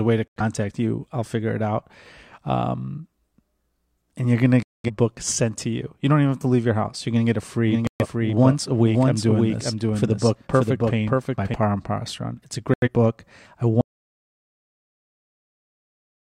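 A digital receiver losing frames mutes this speech recording four times, a digital broadcast dropout, leaving short silent holes at 0.28–0.41 s, 4.63–4.90 s, 7.87–8.07 s and 12.74–12.88 s. From 7.68 to 11.54 s, a second capture path, likely, produces a doubled audio track: a dry copy roughly half a second late and about 5 dB quieter. At 13.81 s the input is likely cut off, leaving an audio dropout to silence with dead silence and no room tone through to the end.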